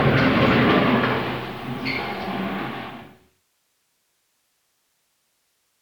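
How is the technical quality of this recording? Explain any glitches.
Nothing here sounds like a glitch at all; the sound just eases gently down from around two and a half seconds until it's gone by 3.47 s, the kind of tidy fade-out an editor would put on.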